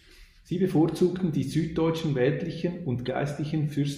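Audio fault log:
1.97–1.99 s and 3.06–3.08 s, corrupt frame decoded: each event is a brief chirp or blip lasting about 20 ms, peaking at roughly -30 dBFS. The decoder played compressed frames containing flipped bits. Misread gains and codes put energy at the wrong frequencies for as long as each damaged frame lasted. The first burst points to a handful of consecutive frames being hit, and the second to a couple.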